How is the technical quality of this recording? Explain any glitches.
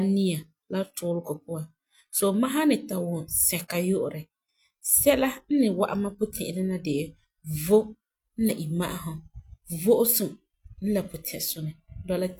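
One glitch stands out in the speech. At 8.46 s the audio makes a small jump forward, caused by compressed frames skipped: roughly one 46.4 ms frame, about 50 ms of audio, never played.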